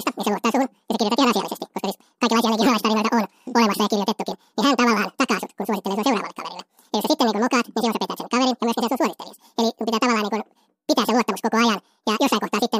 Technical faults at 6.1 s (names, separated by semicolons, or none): audio read two samples at a time (double speed)